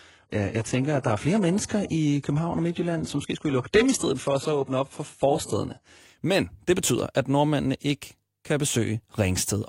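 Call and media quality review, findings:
Adaptive stream starting at a low bitrate, 0–6.0 s: synthetic treble, nothing above 11.5 kHz, then sudden gapless step up, unlike a rebuffering stall.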